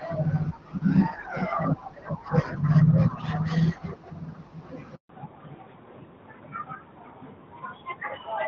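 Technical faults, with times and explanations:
4.95 to 5.09 s, handover gap: the speech decays within a few tens of milliseconds and a 140 ms silence follows while the call moves between networks and no speech frames arrive, so that stretch is simply missing. On a waveform it shows as a flat line, on a spectrogram as a blank vertical band.
5.09 to 8.48 s, fallback to narrowband: after the gap the speech turns duller and rougher because the call has dropped from HD Voice to a narrowband codec that keeps nothing above 4 kHz. A spectrogram shows a hard ceiling at 4 kHz where the upper band disappears, which fits a switch from AMR-WB at 12.65 kbit/s to AMR-NB at 12.2 kbit/s.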